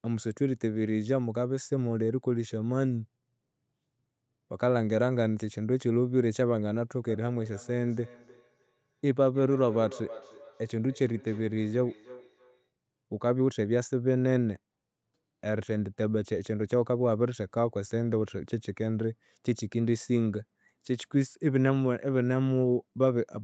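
From 7.08 to 12.71 s, feedback echo between two devices returns speech about every third of a second, as discrete repeats rather than reverb's smooth tail.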